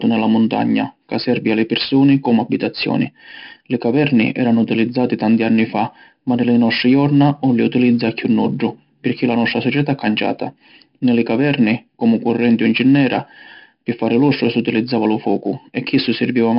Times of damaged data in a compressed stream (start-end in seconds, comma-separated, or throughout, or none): none